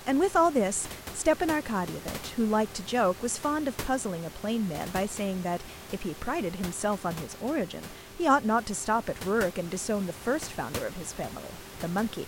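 The clip is speech, and nothing is technically wrong with it; the room's background noise sits about 14 dB below the voice.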